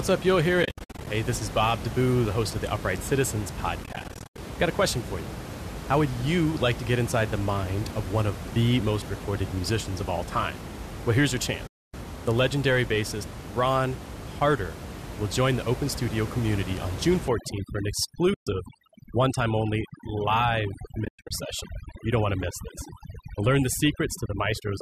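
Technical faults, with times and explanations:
0.63–1.07 s, 3.84–4.38 s, 11.67–11.94 s, 18.34–18.47 s, 21.05–21.31 s: AAC frame loss with muting. The sound drops into soft-edged holes, about 280, 300, 270, 130 and 220 ms in total. The first, second and last are broken up, with runs up to roughly 70–100 ms. Lost frames get zeroed spectra and the overlapping windows fade in and out.
17.28 s to the end: overdone noise removal. The room noise, which sat about 10 dB under the speech, drops and breaks up into twinkly specks. Quiet parts of the speech get pulled down with it.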